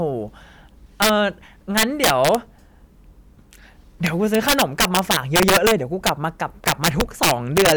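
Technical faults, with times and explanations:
1.02–1.09 s, 1.78–2.35 s, 4.07–5.71 s, 6.07–6.09 s and 6.68–7.72 s: integer overflow. The speech cracks on its loud peaks, sharper than ordinary clipping. The signal went about 3 to 10 dB past the integer limit, and each peak over it wrapped to the opposite sign instead of being held at the limit.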